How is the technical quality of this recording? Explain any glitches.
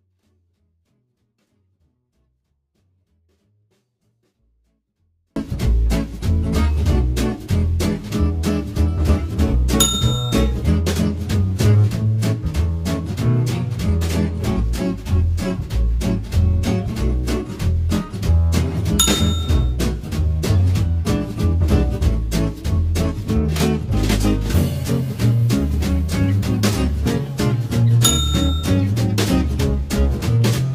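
The recording has one clear fault at the start. From 0.0 to 5.36 s, a 24-bit alignment error leaves the sound clean but about 48 dB too quiet. The 24-bit samples were misread as full 32-bit values, so the waveform shrinks to a near-flat line.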